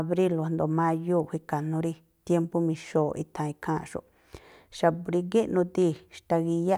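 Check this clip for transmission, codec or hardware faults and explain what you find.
No faults can be heard anywhere in the speech.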